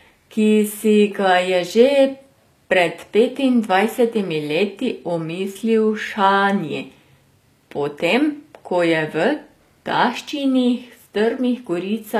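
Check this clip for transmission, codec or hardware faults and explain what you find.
One codec fault runs through the whole clip: the speech has the sound of HE-AAC compression, likely at a low rate around 24 kbps. Only the lower spectrum is coded properly. The treble is rebuilt by copying lower bands upward under a coarse envelope, so the harmonics fail to line up across the crossover and s sounds turn gritty and metallic. A spectrogram shows repeated, smeared patches in the upper bands and nothing above 14.9 kHz.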